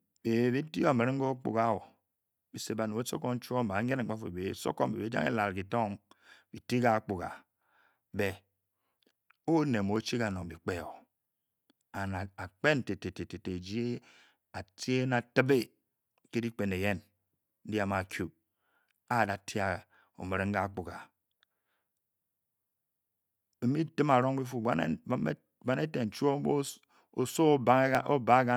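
From about 1.97 s to 27.95 s, periodic USB or driver dropouts occur: something stalls the USB link or audio driver every 2.0 s, and a sliver of well under a millisecond is skipped outright rather than padded with silence. Each skip joins the waveform abruptly, so the speech carries an evenly spaced tick, about fifteen in all, audible only while there is signal.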